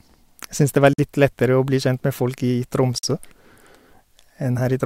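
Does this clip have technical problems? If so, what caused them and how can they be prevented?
Yes. A gap between chunks cuts in at 0.93–0.98 s, between "det var" and "litt lettere å bli", and again at 2.98–3.03 s. Each is a 50 ms hard-edged silence arriving 2 s apart, visible as blank vertical stripes on a spectrogram and flat-line holes in the waveform. Playing chunks back-to-back with gapless buffering and stripping codec padding prevents it.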